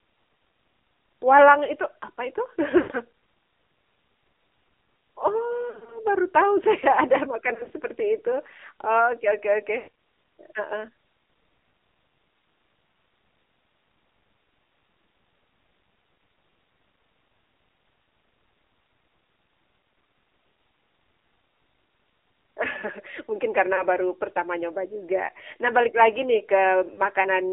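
The speech runs through the AMR narrowband mobile codec throughout. Its low-rate vocal-tract model, consistent with the 7.4 kbps mode, and a 300 Hz to 3.6 kHz line band leave the voice muffled, buzzy and plainly synthetic.

Lost AMR speech frames occur where radio errors corrupt frames and the decoder stretches the last good settings with falling gain. This happens at 2.78–2.92 s after "itu apa itu", at 5.70–6.00 s before "baru tahu saya ada", and at 7.54–7.72 s before "seperti itu". Further losses fall at 9.78–9.88 s, 23.76–23.83 s and 26.94–27.01 s. Each is a smeared warble or dip, and the longer runs fade towards silence.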